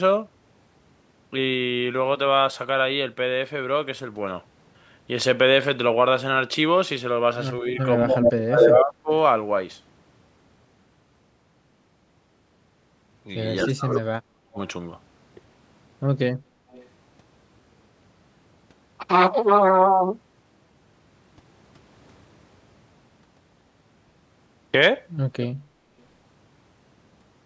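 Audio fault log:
7.62–9.11 s: speech suppressed in double talk. The voice dips by roughly 25 dB for about a second in total, likely because the echo canceller turned down both sides while both talked.
7.78–8.72 s: echo leak. A copy of the voice returns 257 ms late at about the same loudness, likely because the far-end loudspeaker pickup was not fully cancelled.
13.6–14.0 s: echo leak. The same 257 ms delayed copy returns, a little quieter than the speech, likely from loudspeaker sound that escaped cancellation.
13.66–14.58 s: speech suppressed in double talk. The voice drops by up to roughly 40 dB across about 0.7 s, likely from the canceller suppressing both overlapping talkers.
16.55–16.68 s: background gated by the echo canceller. Room sound dips by about 6 dB for roughly 150 ms while the loudspeaker plays, then returns when the canceller releases.
16.72–16.88 s: echo leak. A very faint copy, about 30 dB down, arrives 227 ms late, likely residual loudspeaker sound the canceller missed.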